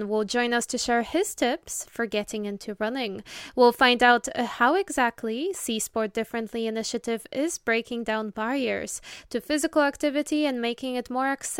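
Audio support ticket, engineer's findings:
Listened through the whole clip and found nothing to flag, so no fault to log against this ticket.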